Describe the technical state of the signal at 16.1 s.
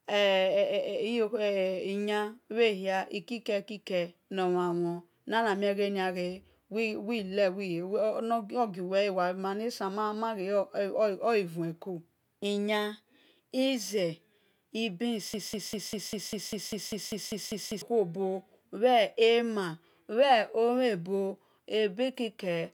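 At 16.1 s the speech is caught in a broken-record loop. It runs from 15.34 s to 17.82 s. A fragment of about 0.2 s, 198 ms, repeats exactly, back to back, thirteen times. The result is a rapid, mechanical stutter with no forward progress. The likely cause is a stalled player, encoder or stream that kept resending the last fragment it held. The speech that belonged in those two and a half seconds is lost.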